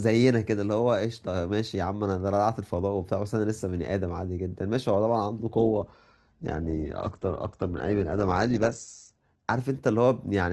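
An adaptive stream at a lower bitrate degrades this speech clip from 5.54 s to 9.54 s. For those four seconds the player evidently fetched a lower-quality rendition after the connection slowed. The treble abruptly disappears, with nothing above 8.2 kHz, and the speech takes on more codec artefacts, which fits a switch from Opus at around 64 kbit/s down to roughly 12 kbit/s. The change is sudden in both directions, with no gap or dropout.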